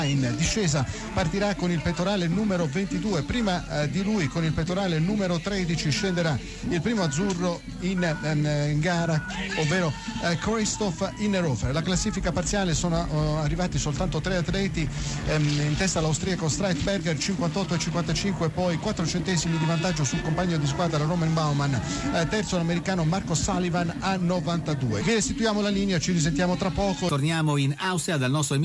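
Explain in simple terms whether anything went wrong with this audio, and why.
Nothing went wrong here: the signal stays steady and unbroken throughout, with no dropouts, glitches or sudden changes in level anywhere in the recording.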